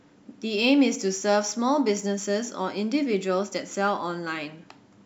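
Sample clock jitter runs throughout this speech clip: the converter's clock wanders by around a microsecond, so each sample lands slightly off time. The resulting error, roughly 40 dB below the signal, adds a faint hiss that swells on loud, bright passages and disappears in pauses.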